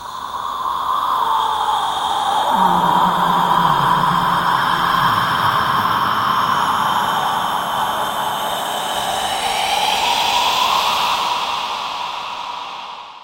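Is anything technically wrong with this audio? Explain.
Yes, there is a call bitrate drop from 2.41 s to 7.25 s. The call's bandwidth estimate collapsed and the encoder was forced to spend far fewer bits, which fits a fall from around 128 kbps to about 19 kbps, bottoming out for roughly 2.5 s. The audio turns coarse, watery and muffled until it recovers. On a spectrogram the upper frequencies abruptly vanish across that span, leaving a flat ceiling, while the waveform envelope changes little.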